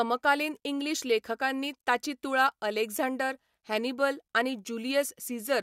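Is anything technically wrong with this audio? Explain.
No, the speech signal shows no technical faults that can be heard.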